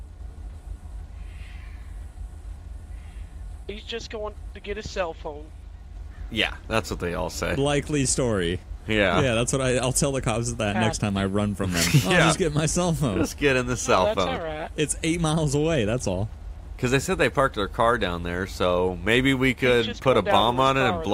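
A switching supply whistle sits in the sound from 11.13 to 13.13 s, a faint high tone around 10 kHz, roughly 35 dB below the programme, drifting between 9.5 and 10.3 kHz. On a spectrogram it shows as a thin, wandering horizontal line; the waveform barely changes.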